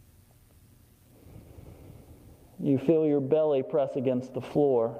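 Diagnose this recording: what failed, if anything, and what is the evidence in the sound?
Nothing failed; no stage shows any audible fault.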